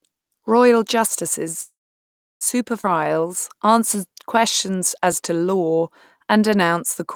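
At 1.48 s the sound jumps at a dropped buffer, likely an overrun in which the capture program fell behind and a few milliseconds of sound were overwritten. On a waveform it shows as a sudden discontinuity, and on a spectrogram as a thin vertical broadband line.

From 1.61 to 2.43 s comes a call audio freeze, likely caused by late packets draining the jitter buffer. The last sound is stretched into a fading buzz or hiss, then about 0.69 s of silence follows. The spectrogram shows smeared, decaying bands and then blank space. Nothing is lost, but the audio now runs about 0.8 s late.

At 2.81 s the audio skips ahead. Roughly 0.4 s is discarded and the two sides are joined with only a 23 ms patch, so the sound lurches forward. The spectrogram shows an abrupt seam where the patterns on either side don't match.

From 3.04 s to 7.14 s a jitter buffer slow-down repeats single pitch periods to rebuild reserve. 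Playback runs at 92% speed with unchanged pitch, adding 347 ms, and sounds drawn out. Harmonic bands stay level but stretch sideways, and the waveform shows runs of near-identical repeated cycles. Inside this stretch, at 5.12 s, another dropped buffer, likely an overrun losing about 3 ms, leaves a second small jump and a narrow vertical line.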